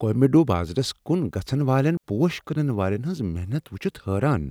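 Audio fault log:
1.97 to 2.04 s, digital wireless dropout: between "بازرس کن گژھن والین" and "پوش کٕنن والین ہنٛز" the speech cuts to near silence for about 65 ms, as the receiver mutes on lost data. The waveform shows a flat gap and the spectrogram a clean vertical blank band, with no noise burst at either edge.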